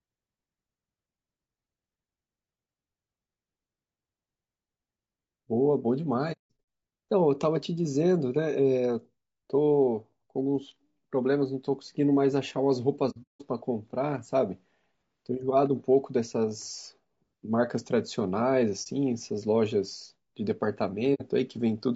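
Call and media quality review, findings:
Codec: low-delay AAC compression, likely AAC-ELD at a low bitrate, consistent with about 32 kbps. Short transform frames resolve speech harmonics poorly. Throughout: speech rough and grainy, noise filling the gaps between harmonics, top band thin and synthetic-sounding. Damage plainly audible.

Packet path: AAC frame loss with muting. Decoder zeroed the spectrum of lost frames, and the overlapping windows fade sound out and back in, leaving soft-edged holes. 6.32–6.64 s: 270 ms lost across 360 ms, longest gap around 200 ms. 13.10–13.42 s: 240 ms lost across 300 ms, longest gap around 200 ms. 18.83 s: single dropout, about 30 ms. 21.14–21.22 s: 60 ms hole.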